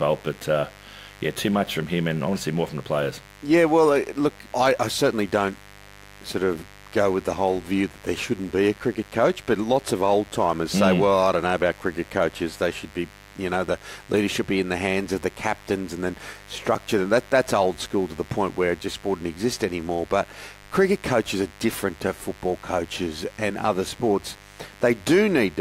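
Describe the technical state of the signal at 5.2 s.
Mains buzz is present at 5.2 s, as it is throughout the recording. Sharp switching spikes from a dimmer, rectifier or poorly shielded cable arrive twice per 50 Hz cycle, stacking harmonics into the kilohertz range and producing a steady, raspy buzz roughly 25 dB beneath the speech.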